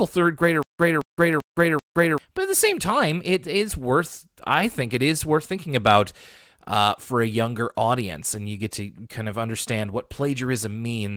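From 0.63 to 2.18 s, stutter with silent gaps: an identical 220 ms block repeats four times between 168 ms flatline gaps on the waveform, likely from a stalled stream replaying its last fragment.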